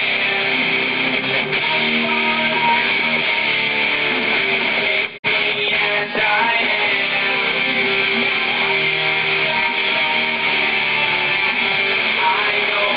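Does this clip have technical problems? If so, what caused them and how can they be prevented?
Yes. A digital broadcast dropout occurs from 5.17 to 5.25 s. The receiver stopped getting valid frames and muted. The sound fades out over 20 ms, and about 48 ms of programme is lost, which fits roughly two corrupted frames. Stronger reception and more robust error protection would prevent it.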